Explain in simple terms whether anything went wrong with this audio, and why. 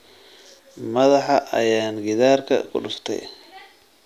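Nothing went wrong with this audio; the speech comes through without any fault that a listener could point to.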